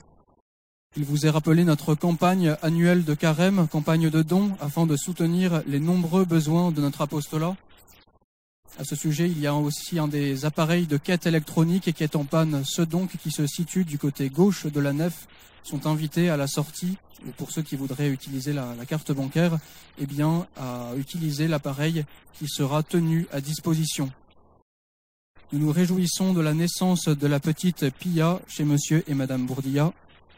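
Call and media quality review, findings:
No findings: the call and media quality review turned up no faults in this audio.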